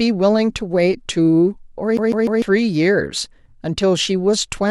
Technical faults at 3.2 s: none

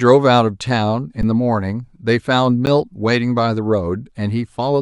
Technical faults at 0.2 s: none

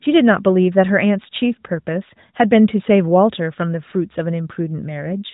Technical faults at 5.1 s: AMR rate drop

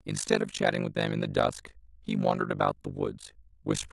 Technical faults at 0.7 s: overlap-add ripple

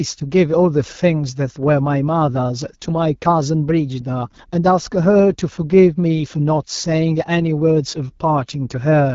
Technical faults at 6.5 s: AMR wideband (HD Voice) codec

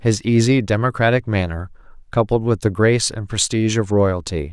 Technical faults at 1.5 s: none

